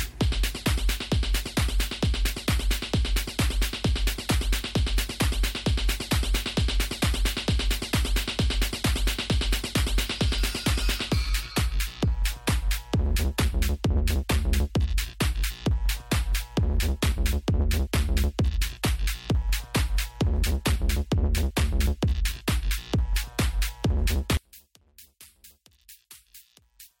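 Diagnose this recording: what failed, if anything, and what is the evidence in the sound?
One channel inverted, from 24.37 s to the end: the sound drops by about 28 dB, with the centre nearly gone. When the two channels are summed, their shared content cancels, which points to reversed polarity on one leg, likely a miswired analogue connection.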